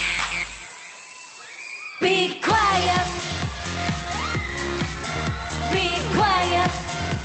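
No technical faults can be heard in the audio.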